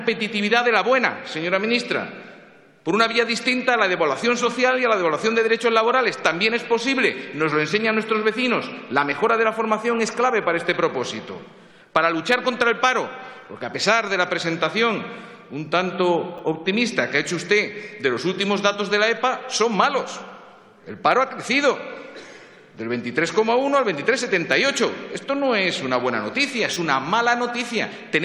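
At 16.38 s and again from 26.74 to 26.76 s, fresh audio failed to reach the device in time, so it replayed its last block, a repeated buffer. The repeated slice is short enough to suggest a 10 ms buffer, heard once extra and then twice extra, so each gap comes out as a hard-edged click or tiny buzz rather than a stutter.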